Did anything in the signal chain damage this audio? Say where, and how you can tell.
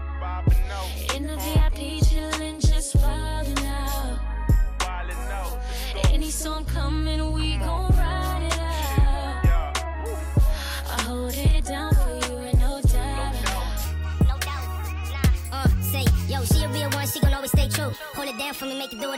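Yes. A wrong sample rate at playback from 13.85 s: speed rises 1.5 times with pitch up 7 semitones, fitting 32 kHz audio played at 48 kHz. A time-stretch would change speed without pitch.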